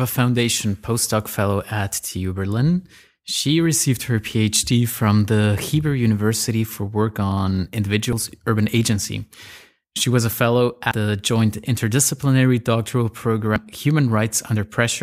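Speech with three likely dropped buffers (overruns), where samples were overwritten before being read. At 8.13 s about a twentieth of a second vanishes, and at 10.91 and 13.56 s roughly 150 ms each, heard as jumps where the sound skips ahead with no gap.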